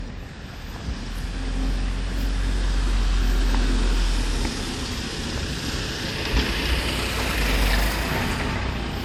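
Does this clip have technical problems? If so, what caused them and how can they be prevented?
Yes. Throughout the clip, nothing is present above 19.4 kHz. The likely cause is low-bitrate audio saved at a high bitrate. The sound points to a roughly 64 kbit/s WMA file later re-encoded as 320 kbit/s MP3, which cannot restore what was lost. Prevent it by always encoding from the original source.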